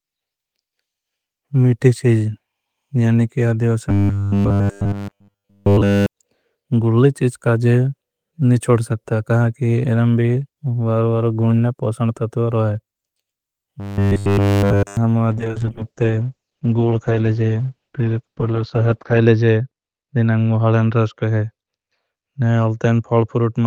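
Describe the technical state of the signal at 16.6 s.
At 16.6 s the speech is inside a call bitrate drop that begins at 15.34 s and runs to the end of the clip. The encoder falls from 32 kbps to 8 kbps, coding coarsely and cutting the bandwidth from 20 kHz to 6 kHz, so the speech sounds muffled and rough.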